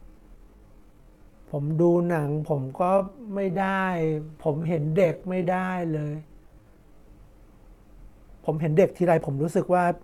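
A time-stretched section runs from 0 to 7.02 s, playing at 0.63 times normal pace with unchanged pitch. It drags, likely from repeated fragments padding the length.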